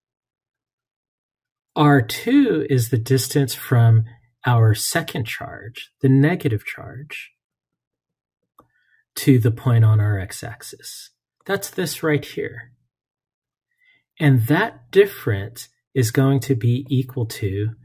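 No technical faults can be heard anywhere in the audio.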